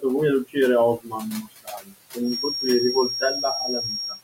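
A noise suppressor is working throughout this speech recording, pulling the background down by about 18 dB frame by frame, so the room noise, sitting about 15 dB under the speech, sinks in the gaps and swells back under the talking. The same suppressor also mistakes parts of the speech for noise and cuts it: from 0.98 to 1.22 s the level drops by up to about 20 dB, and from 1.42 to 1.95 s by up to about 17 dB. Over roughly a sixth of a second and then about a third of a second, sounds come out swallowed and faint. From 2.20 s to the end a thin, steady whistle near 5.6 kHz sits only about 5 dB below the speech and swells and fades slowly in level, most likely a feedback whistle from a loudspeaker-to-microphone loop held just short of runaway.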